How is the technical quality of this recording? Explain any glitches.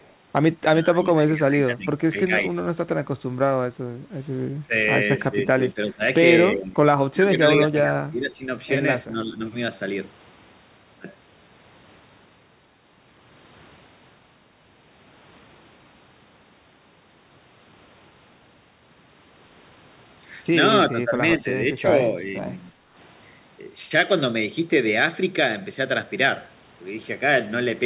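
The recording has three kinds of fault: a brief echo leak at the start, repeated dips in the talker's level consistent with speech suppressed in double talk, and one short dip in the room sound. Through the narrowband call path, the spectrum ends at 4 kHz, which fits G.711 A-law at 64 kbps.

Echo leak, 0.01 to 0.13 s: A faint delayed copy of the voice played on the far side's loudspeaker comes through, lagging by about 341 ms and sitting roughly 40 dB under the speech. This is likely a loudspeaker on the other end whose echo canceller missed a residue of what its microphone caught and sent it back. It is a barely audible ghost. On a spectrogram, it shows as a dim smear repeating earlier energy; on the waveform it is almost invisible.

Speech suppressed in double talk, at 0.78 to 2.57 s, 4.67 to 4.73 s, 5.3 to 6.02 s, 6.56 to 8.46 s, 9.05 to 9.4 s and 20.91 to 22.47 s: The talker's level sags while the other side is speaking. 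The drop is around 15 dB in most spots, about 20 dB at 6.56 s and only a few dB at 9.05 s. The echo canceller likely could not tell local speech from loudspeaker echo and attenuated both. On the waveform, the envelope pinches down in patches. On a spectrogram, the harmonics fade or break into gaps.

Background gated by the echo canceller, 22.74 to 22.95 s: Right after the last overlap, the room tone drops by about 8 dB for roughly 200 ms and then recovers. The canceller clamped the microphone while the loudspeaker was active and released it shortly after. This is heard as a brief hush in the ambience. The spectrogram shows a short darker band across the noise floor, and the waveform's noise floor narrows for that instant.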